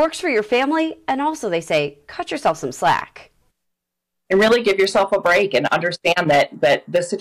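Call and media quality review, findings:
Hard clipping, throughout. Harsh fuzz and crackle on every loud sound. Probable component: gain stage or converter driven about 11 dB past full scale. Peaks cut flat on a few percent of samples; flat tops add high harmonics.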